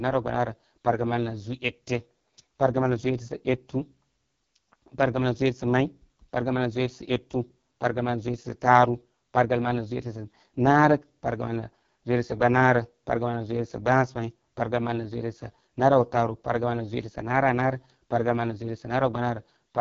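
Speech here sounds rough and raspy throughout, with nothing above 7 kHz. That is heavy AMR wideband (HD Voice) codec damage at a very low rate, which fits its 6.6 kbit/s mode, too few bits to model the voice faithfully.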